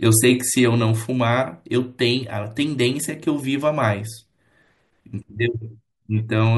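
No technical faults can be heard in this speech recording.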